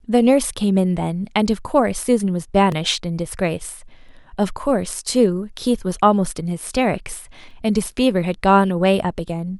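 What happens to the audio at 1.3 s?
Nothing goes wrong at 1.3 s; the speech carries on intact through that moment, with no dropout, click or distortion to be heard there.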